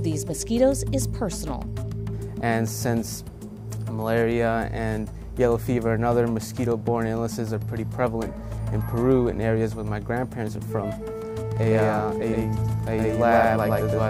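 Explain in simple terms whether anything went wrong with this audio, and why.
A doubled audio track starts at 11.57 s and runs to the end. From that moment a second, identical copy of the sound plays about a tenth of a second behind the first, at roughly the same loudness, so everything seems to stutter or echo. The copy has no fading tail or room sound, and it switches on abruptly. The likely cause is the same sound being picked up twice, once through a slower route, or an edit leaving two copies out of step.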